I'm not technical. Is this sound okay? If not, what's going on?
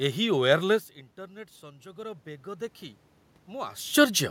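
No. From 1.6 to 2.82 seconds there is automatic gain rising: the automatic volume control heard quieter input and turned itself up, so the voice and room noise swell together.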